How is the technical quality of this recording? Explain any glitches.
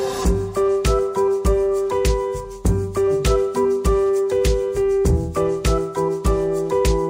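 The recording has one fault, present throughout. Imaging from linear upsampling: converting 24 kHz to 48 kHz by straight-line interpolation dulls the top of the band and leaves a mirrored copy roughly 30 dB down between 12 and 24 kHz. This is heard as a faint metallic shimmer, and a spectrogram shows it as a reflected band above 12 kHz.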